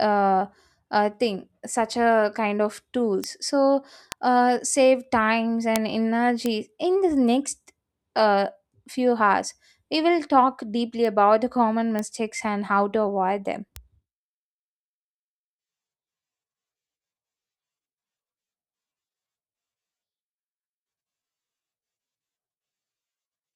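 Speech with bit error spikes, single sharp ticks at 3.24, 4.12, 5.76, 6.46, 11.05, 11.99 and 13.76 s. Each is a flipped bit jumping one to three samples by a power of two, the strongest about 18 dB above the weakest, broadband and unrelated to the speech.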